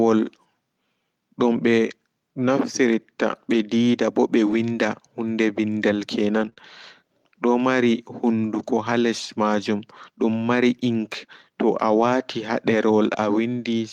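At 4.47 to 4.53 s and 6.41 to 6.47 s, speech passes through a lost packet rebuilt from error correction. Each 40 ms stretch, which fits two lost 20 ms packets, was replayed from the low-bitrate copy carried in the following packet. There is no gap, but the sound turns briefly rougher and noisier.

Right after, at 6.49 to 6.53 s and 6.53 to 6.58 s, come two short concealed packet losses. About 20 ms went missing each time, and the decoder extrapolated the preceding sound, then crossfaded back. The result is a smeared, wobbly patch.

The same error-correction rebuild closes that cluster at 6.58 to 6.60 s (20 ms). It recurs at 8.58 to 8.64 s (40 ms), 10.42 to 10.44 s (20 ms) and 11.96 to 12.02 s (40 ms), each a short grainy roughening without any dropout.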